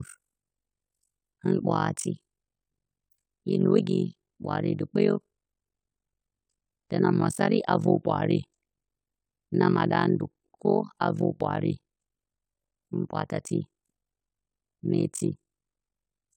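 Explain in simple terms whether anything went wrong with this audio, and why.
Throughout the speech, the level pulses about fifty times a second, dipping almost to silence each time. This is overlap-add ripple: the frames were rejoined with an overlap that does not keep the level constant. Unlike a steady mains hum, it chops the sound itself, giving a harsh, rough flutter.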